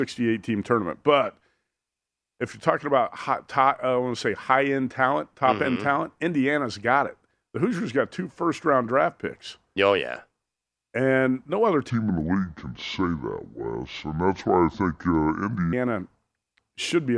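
From 11.90 to 15.73 s the speech turns low and sluggish, slowed to 0.69 speed and about 6.5 semitones down: a wrong sample rate, which fits 32 kHz audio played back at 22 kHz.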